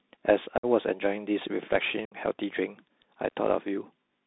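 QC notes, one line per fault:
Throughout: Bluetooth CVSD headset codec. The speech is confined to a 200 Hz to 3.7 kHz line band, so nothing above roughly 4 kHz survives. One-bit delta coding at a 64 kHz rate leaves a granular hiss under the voice, sibilants come out scratchy, and loud high content overloads the adaptive step and distorts audibly.
0.58 to 0.66 s and 2.05 to 2.15 s: unconcealed Bluetooth headset packet loss. Each event cuts out about 56 and 64 ms of speech respectively, which fits a run of roughly fifteen short voice packets dropped between headset and phone. The gaps are filled with silence or an idle pattern, not concealed, so they open and close abruptly and the speech returns briefly quieter as the CVSD step size rebuilds.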